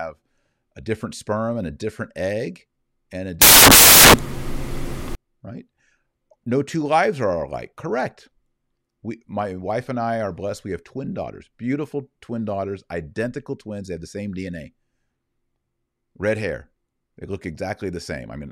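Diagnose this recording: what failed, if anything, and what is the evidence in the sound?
The fault sits in sample-format conversion: samples built from the wrong bytes. Just after "different egg and a", from 3.42 s to 5.15 s, the speech is replaced by loud, harsh broadband noise. The bytes of each sample were assembled wrongly, through a byte offset, swapped byte order or a mismatched alignment. The rapidly changing low bits then land in the high part of each value. That turns the signal into broadband hiss.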